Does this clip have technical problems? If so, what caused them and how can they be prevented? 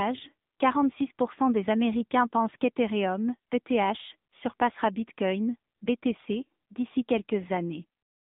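Yes. AMR narrowband mobile codec damage runs throughout: the speech is confined to roughly 200 Hz to 3.7 kHz, and a low-rate vocal-tract model rebuilds it from sparse pulses, giving a plainly buzzy, synthetic quality that fits the 7.95 kbps mode. Prevent it by recording locally or using a wideband or full-band connection instead of a narrowband mobile call path.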